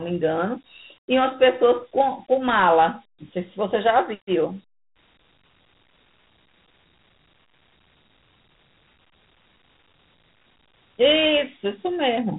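Throughout, the speech has passed through Dialogic VOX ADPCM, coarse 4-bit adaptive coding that fits a 32 kbps telephony stream. Nothing survives above 3.9 kHz, leaving a narrow, boxed-in sound, and plainly audible gritty hiss rides on every syllable.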